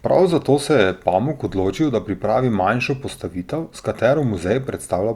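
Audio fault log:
No faults found anywhere in the speech recording; nothing to log.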